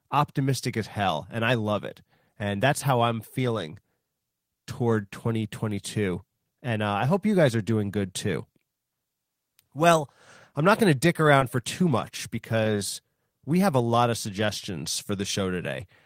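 At 11.39 to 11.43 s and 12.63 to 12.67 s, short concealed packet loss occurs. About 20 ms went missing and was synthesised, leaving brief smears.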